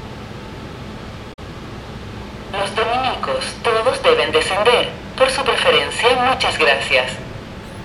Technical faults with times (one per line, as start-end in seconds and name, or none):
1.29-1.39 damaged data in a compressed stream